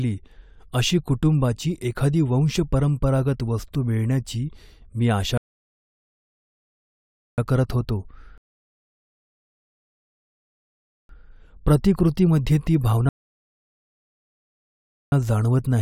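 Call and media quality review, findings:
Rebuffering stall, three events in speech: 5.38–7.38 s (2.0 s), 8.38–11.09 s (2.7 s), 13.09–15.12 s (2.0 s). Playback buffer underrun at the client player; download fell behind, output held silent until data arrived. Differs from packet-loss dropout: no material missing, speech resumes exactly at the cut point, about 6.7 s total added to playback time.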